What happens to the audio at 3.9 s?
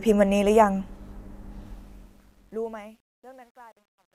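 Truncation distortion: an undithered fade-out, fitting an 11-bit stage, coarsens the waveform from 1.66 s to 4.15 s, so at 3.9 s it sounds gritty.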